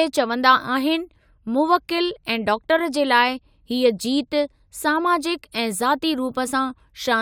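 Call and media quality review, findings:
Nothing to flag on this one; the speech came through without any faults worth a ticket.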